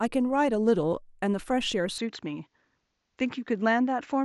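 At 1.98 s the speech abruptly loses its top end and stays that way to the end of the clip: nothing is left above 7.6 kHz, so it sounds duller and slightly boxier, with no gap at the change, no jump in loudness, and only a faint new noise floor far below the speech. The likely cause is the input switched to a poorer device, a second microphone or headset passing a narrower band.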